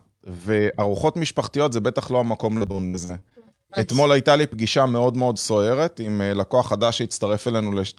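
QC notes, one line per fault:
2.57–3.36 s, repeated packet loss (robotic sound): across this stretch of speech, audio data went missing in a rapid string of dropouts, roughly a dozen by ear. The longest hole was 66 ms. Each gap was bridged by stretching the preceding sound, about 260 ms patched in all, which is a third of the span. The fill repeats the same waveform over and over, and the unpatched parts leave choppy holes.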